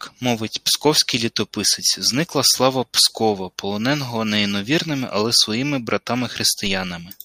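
At 6.67 s a DC step occurs: the waveform's zero line jumps abruptly by about −25 dBFS, then drains away slowly, much as a 2 Hz high-pass would pull it back. The sudden shift is heard as a single low thump while the speech continues unaffected.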